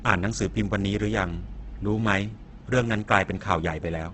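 Opus compression runs through the whole of this speech recording, heavily degrading it. Nothing survives above 8.4 kHz, so the sound is held to a wideband ceiling. Within that range the encoder has too few bits to code each band properly. It keeps the band energies and fills the gaps with folded or noise-like content, which is why the speech comes across as grainy and rough rather than swirling. The likely cause is music-mode Opus at a very low bitrate, roughly 12 kbps.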